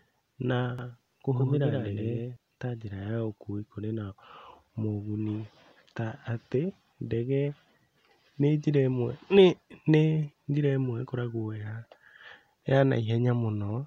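From 0.79 to 2.37 s there's a doubled audio track: a second copy, a few dB down, trails about a tenth of a second behind, likely from a slow capture path, cutting out abruptly just before "ta njĩra".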